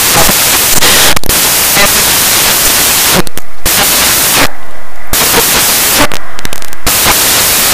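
From start to finish the speech is affected by samples built from the wrong bytes. Each value is assembled misaligned or byte-swapped, so noisy low bits dominate. It sounds like loud, harsh noise, close to white. The spectrogram shows flat broadband energy.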